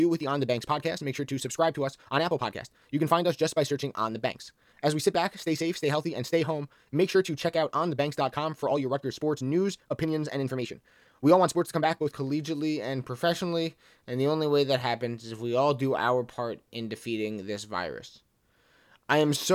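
From 0.0 to 12.16 s the speech runs as a time-stretched section, sped up about 1.65 times with pitch held. It sounds rushed, likely from software dropping short pieces to shorten it. At 12.16 s the pace changes abruptly.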